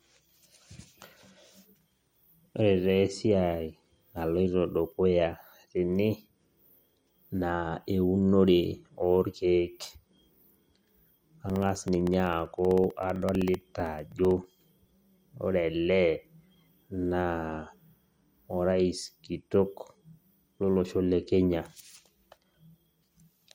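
From 11.50 to 14.70 s the speech carries periodic USB or driver dropouts: every 64 ms a blocked bus or driver drops roughly a millisecond of audio and leaves silence, producing a steady train of about fifty small ticks that sound only under speech.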